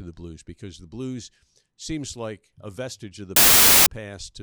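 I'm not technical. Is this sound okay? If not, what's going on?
No. From 3.36 to 3.86 s, right after "a vestige of the", there is half a second of harsh, very loud hiss with abrupt edges. This is file tags played as audio: an embedded cover picture's compressed data was read out as sound.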